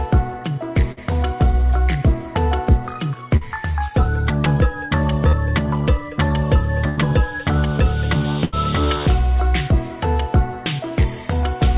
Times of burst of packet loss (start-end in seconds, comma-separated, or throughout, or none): 0.92-1.00, 6.89-7.00, 8.45-8.55